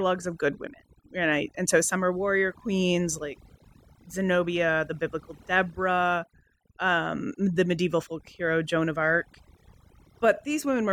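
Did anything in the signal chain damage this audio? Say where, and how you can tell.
Yes. Throughout the speech, the background sinks to near silence flecked with twinkling specks. That is overdone noise removal at the processing stage: a suppressor set too hard shuts off individual frequency bands near its noise estimate, taking quiet voice detail with them.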